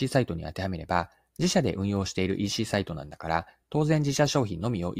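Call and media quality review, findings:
No audible faults found in this speech recording.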